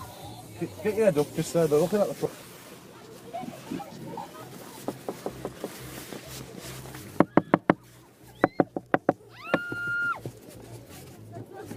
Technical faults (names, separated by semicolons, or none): skip ahead; jitter buffer speed-up